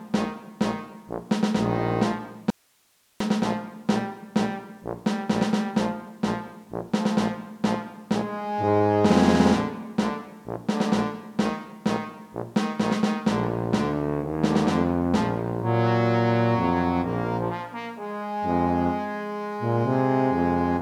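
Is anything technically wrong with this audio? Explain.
Yes. An audio dropout to a faint residue runs 2.50 to 3.20 s. The sound cuts abruptly to hiss about 40 dB down, likely from brief source loss. The waveform flattens and the spectrogram shows a sharp-edged, noise-filled gap.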